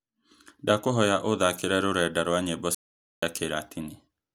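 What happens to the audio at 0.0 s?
At 0.0 s the audio is clean, and nothing is wrong with it at that moment.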